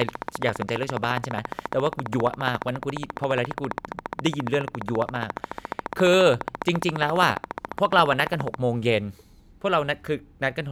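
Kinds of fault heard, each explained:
Train of clicks: a steady ticking runs over the speech from about 0.02 s to 8.55 s, around 14.5 clicks per second at a regular pace, roughly a hundred and fifty in all. Each click has much the same sharp shape and stands well above the speech, so the ticking stays plain through the pauses too. Such an even, repeating pulse is likely interference from nearby equipment or a faulty connection or power supply.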